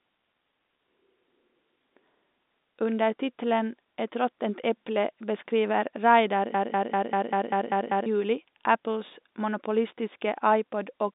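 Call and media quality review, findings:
Broken-record loop, 6.54–8.06 s: 196 ms fragment repeats eight times back to back. Likely a stalled player or stream resending its last buffer; speech in that span lost.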